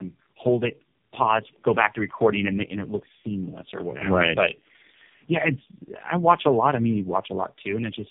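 From start to finish, the speech carries tandem speech coding. It sounds as if it went through three low-rate speech codecs in a row, which fits an AMR-NB to G.729A to AMR-NB path with G.711 hops between. Each coder re-models what the previous one already smeared, so the damage stacks up: a gritty, buzzy roughness, a warbly, watery wobble on vowels, and a muffled top with nothing above 3.5 kHz.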